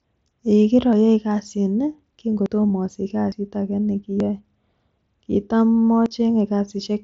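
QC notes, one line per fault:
0.93, 2.46, 3.32, 4.20 and 6.06 s, dropped buffer (overrun): each is the speech jumping forward instead of pausing, since a chunk of audio vanishes and the two sides butt straight together. The jumps at 2.46 and 3.32 s skip roughly 50 ms, and the other three lose only about 20 ms. The likely cause is the capture side not reading its buffer in time before the hardware wrote over it.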